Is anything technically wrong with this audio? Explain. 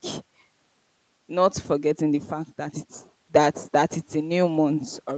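No, nothing is technically wrong.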